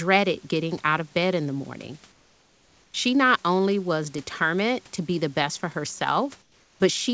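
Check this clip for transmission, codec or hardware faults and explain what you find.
Two pauses have their room background replaced by comfort noise. From 2.12 to 2.94 s, between "bed in the morning" and "not only was determined", and again from 6.42 to 6.80 s, the textured room noise gives way to a flat, featureless hiss about 5 and 6 dB quieter. The likely cause is discontinuous transmission: the sender stopped sending during silence and the receiver synthesised matched noise. Unlike a noise gate or dropout, the pause never goes truly silent. Throughout, nothing sounds above 8 kHz, which fits a wideband call codec such as G.722.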